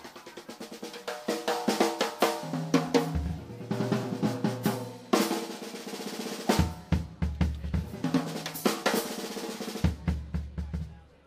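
No technical faults are audible.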